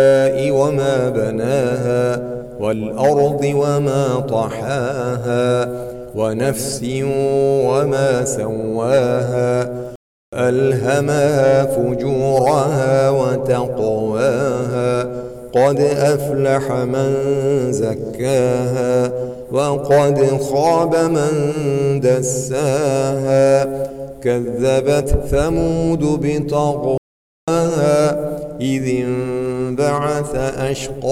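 At 9.96 s the sound cuts out for about 0.37 s, resuming at 10.33 s, and at 26.98 s it drops out again for 0.50 s until 27.48 s. Each is a playback stall, most likely the player starving for data or its thread being held up, so output simply halts mid-flow and then carries on. On a waveform both gaps show as flat silent stretches; a spectrogram shows clean vertical blank bands.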